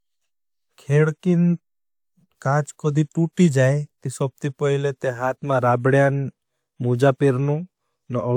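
No technical faults can be heard anywhere in the recording. Nothing in the signal chain draws attention to itself at any point in the speech.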